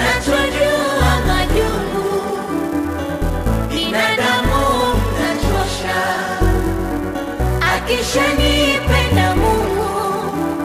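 From start to finish there's a filter restarted on every block: it drops its memory at each boundary and starts from silence, so each block opens with a tiny transient. Those stack into a steady 375 Hz buzz that rises and falls with the signal level, which fits a 128-sample block.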